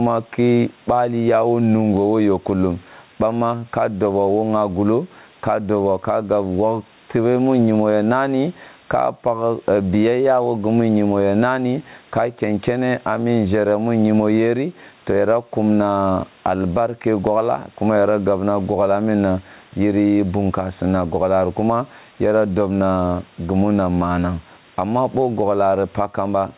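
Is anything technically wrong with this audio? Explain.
Yes. Gain pumping runs through the whole speech clip. The gain ducks under louder syllables and recovers in pauses, by around 10 dB. This is likely a limiter fighting excessive input gain.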